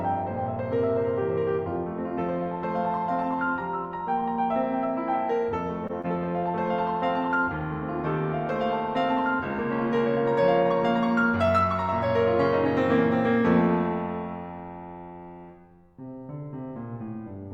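Around 5.87 s the music briefly hangs: a short stall from a late packet. The packet arrived behind schedule, the jitter buffer ran dry, and the receiver stretched the last bit of sound for about 19 ms before carrying on from where it stopped. Nothing's lost, it just sits a beat too long with a faint buzzy smear. The same thing happens again at about 6.01 s, this time a 23 ms stretch, and each one nudges playback a little later.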